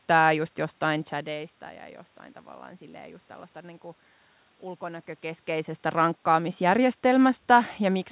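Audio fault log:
No faults heard.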